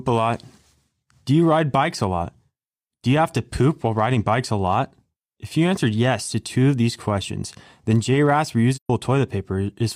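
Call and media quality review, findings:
AAC frame loss with muting, 8.75–8.90 s: speech fades into a brief soft-edged silence, then fades back. Decoder zeroed the spectrum of lost frames; overlapping windows taper the edges. About 128 ms missing, which fits roughly three AAC frames. True silence, not a repeated or smeared concealment.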